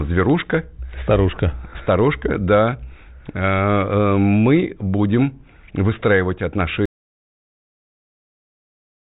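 At 6.86 s the speech stops abruptly and the clip ends in an audio dropout to silence that runs to the end. The gap is silent, with no room tone and no decay, so the signal was cut rather than faded. The cause is likely a lost input, such as a disconnected device or a mute, while recording continued. Before the cut, the band-limited G.726 telephone sound, with nothing above 3.8 kHz, is audible.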